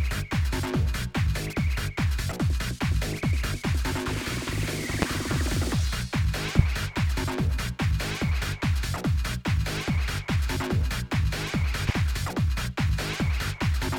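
Three loud pops sit at 5.02–5.05 s, 6.59–6.62 s and 11.89–11.92 s, each a single sharp hit over continuing sound, the first two about 20 dB above it, the last about 10 dB. Each is likely a brief voltage spike from a switch, plug or static.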